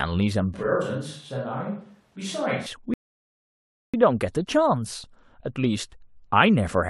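From 0.54 s to 2.66 s the speech turns roomy and hollow, loses bass, and drops by roughly 5 dB, with background noise now audible about 35 dB below the speech. The change in and out is abrupt, which points to a switch to a distant microphone: the close microphone's signal likely dropped out, so the recording fell back to a pickup further from the talker that captures more room reflection and ambient noise.

At 2.94 s the audio cuts to silence and resumes at 3.94 s exactly where it stopped. This is a rebuffering stall: playback ran out of downloaded data and paused until more arrived. No speech is lost, but the silent hold adds about 1.0 s to the running time. The break falls cleanly between points in the sound with no skipped material on either side.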